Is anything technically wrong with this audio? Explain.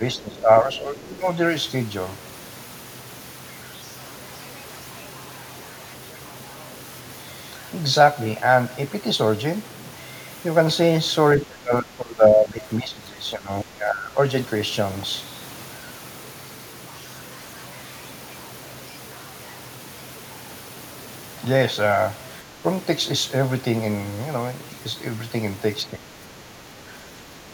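Yes, there are two problems.

Throughout the clip the speech carries a grainy, rough distortion that follows the signal rather than sitting underneath it as steady hiss. The error sits about 25 dB below the speech and grows harsher on quiet syllables and decaying word endings. This is likely low bit depth without dither. Truncation to what fits roughly 7 bits puts every sample on a coarse step, so the rounding error is correlated with the waveform and is heard as distortion.

At four points the talker's level sags or partly breaks up: 0.0 to 1.26 s, with a drop of about 10 dB; 11.37 to 14.17 s, the worst, down about 20 dB over roughly two seconds; 22.43 to 22.64 s, a brief dip of about 5 dB; and 25.91 s to the end, about 10 dB. This points to speech suppressed in double talk. When both ends speak at once, the echo canceller cannot tell the near talker from loudspeaker echo and attenuates the outgoing speech.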